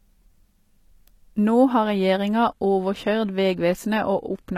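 Adaptive stream at a lower bitrate, from 1.83 s to the end: the stream switches abruptly, with no gap, from a higher-quality rendition to a much leaner one as the connection slows. The speech loses its natural top end, with nothing above 14.9 kHz, and there are more codec artefacts. The sound points to a drop from roughly 96 kbit/s AAC-LC to about 20 kbit/s HE-AAC, which rebuilds high frequencies rather than coding them.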